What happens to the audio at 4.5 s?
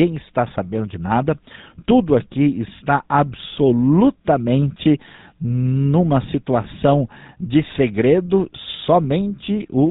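At 4.5 s the speech carries GSM full-rate codec damage, as it does through the whole clip, which fits a 13 kbps GSM link. The codec models the vocal tract and drives it with regularly spaced pulses, discarding two of every three excitation samples, so the speech sounds plainly buzzy and gravelly. Simple band-limiting would only dull the sound. Here there is that gravel as well as nothing above 4 kHz.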